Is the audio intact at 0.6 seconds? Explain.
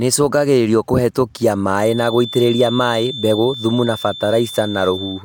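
Yes, the audio is intact at 0.6 seconds, with no technical fault to be heard at that moment.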